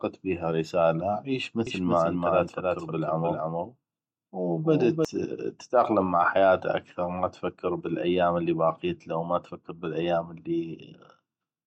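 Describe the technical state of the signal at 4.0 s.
At 4.0 s you're inside a doubled audio track, which runs from about 1.67 s, just after "بيها رساله عيش", to about 5.05 s, just before "تتاقلم مع حياته اكثغ". A second full-band copy of the speech trails the original by roughly a third of a second, a few dB quieter, so every syllable gets a dry, slapback-like repeat with no room tail. It most likely comes from the signal being captured twice, once through a slower path, and both copies getting mixed together.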